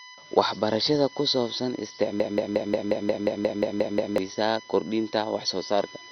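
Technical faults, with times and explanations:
Throughout, USB whine: a steady 1 kHz tone, loudest at its 2 kHz harmonic and about 20 dB under the speech, from USB frame current leaking through power or ground.
Throughout, MP2 compression: dull, gurgly, grainy speech with nothing above 6.1 kHz, likely from starved Layer II sub-bands switching off, which fits a low rate around 48 kbps.
2.2 to 4.18 s, broken-record loop: a 178 ms fragment repeats back to back about 11 times, likely from a stalled player resending its last buffer, so that stretch of speech is lost.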